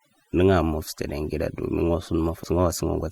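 A speech clip with overdone noise removal throughout. The noise reducer was set too strong. It pulls individual frequency bands far down or out whenever they sit near its noise estimate. Quiet parts of the voice are caught with them. So the background drops, dotted with twinkling specks. This colouring never lets up across the clip. At 2.43 to 2.48 s the sound jumps abruptly ahead, with a small blip at the join. The continuity breaks, as if a piece of the stream is gone. This points to a stream segment skipped, likely because one segment failed to load and the player carried on with the next.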